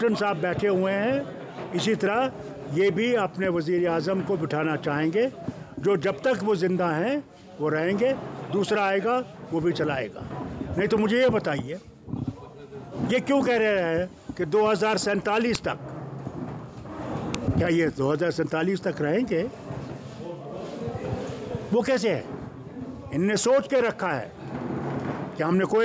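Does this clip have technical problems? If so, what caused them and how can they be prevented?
Yes. File header played as audio: separately saved WAV pieces were joined with their headers intact, so those header bytes play as samples, producing sharp snaps at 15.55 s and 17.35 s. Strip each piece's header before concatenating or streaming, keeping only the raw sample data.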